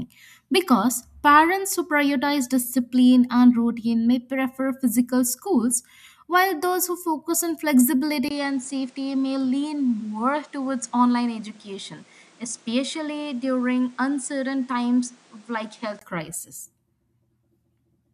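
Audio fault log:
8.29–16.01 s, input switched to a poorer device: after a 20 ms gap the speech turns duller and roughly 5 dB quieter, likely through a lesser microphone. The spectrogram shows nothing above 10.5 kHz and a new noise floor about 30 dB down. The waveform shows the gap, then a smaller envelope.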